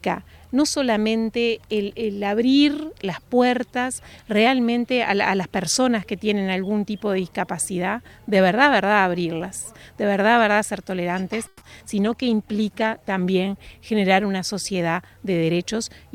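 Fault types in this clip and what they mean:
Call audio freeze: packets were most likely held up in transit and the jitter buffer ran dry, so the receiver stretched the last sound into a brief fading buzz or hiss from 11.47 to 11.63 s. That inserts about 140 ms of filler and adds the same amount of delay, but nothing is lost, and when packets resume the audio picks up exactly where it left off.
Short concealed packet loss: around 11.8 s a few hundredths of a second of audio failed to reach the decoder in time. The receiver patched roughly 10 ms by extending the preceding sound before blending back into the real signal, while about 20 ms is simply gone. The result is a quick smear or wobble, with whatever fell in that gap absent from the sound.
Call bitrate drop: from 11.93 to 15.27 s the bandwidth estimate collapsed and the encoder was cut from 96 kbps to 16 kbps, holding at the lowest rate for about 1.3 s. 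Coding that coarsely strips the upper frequencies and leaves the sound rough, watery or muffled, until the rate climbs back.
Jitter buffer speed-up: between 14.74 and 15.74 s the buffer held more audio than its target, so the receiver trimmed short pitch-period slices over and over to shed the excess, roughly 150 ms in all. The sound plays about 12 percent fast with its pitch unchanged, giving that second a hurried, pressed-forward feel that overlaps the tail of the low-bitrate stretch.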